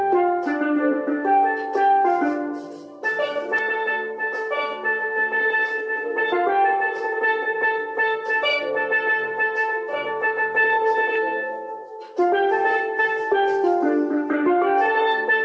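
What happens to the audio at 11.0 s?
Nothing goes wrong at 11.0 s: the audio is intact there, with only the normal 8 kHz band limit of the call path.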